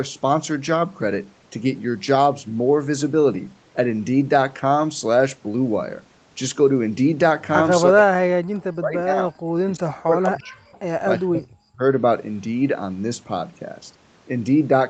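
Speech over a call link, where an echo canceller likely mistook near-end talk for echo during double talk, producing speech suppressed in double talk: the voice drops sharply, by around 40 dB at its deepest, from 7.89 to 9.32 s, 9.62 to 10.76 s and 11.17 to 11.83 s, with the band topping out near 8 kHz throughout.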